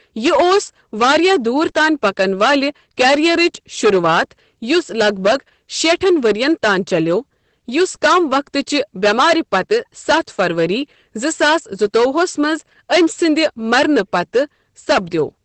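Right from the start and all the way through, the speech is hard clipped. It's pushed about 16 dB past what the chain can pass, so something like 7 percent of the samples get their peaks sheared flat. That gives a harsh, fuzzy edge on every louder syllable, with splatter reaching up the spectrum.

On top of that there's Opus voice compression running the whole length, and its damage is plainly audible. Nothing survives above about 8.5 kHz, which fits wideband SILK coding at a low rate, around 12 kbps. The coarse excitation leaves the speech muffled, hoarse and a bit robotic.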